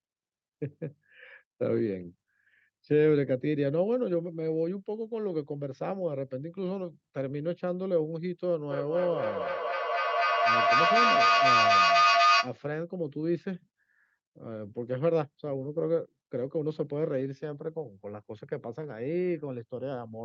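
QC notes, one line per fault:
8.71–12.6 s, feedback howl: a tone near 1 kHz swells to about 6 dB above the speech, repeating roughly every 200 ms as the microphone-to-loudspeaker loop gains on each pass. A spectrogram shows a bright narrow horizontal band, and the waveform shows a swelling envelope.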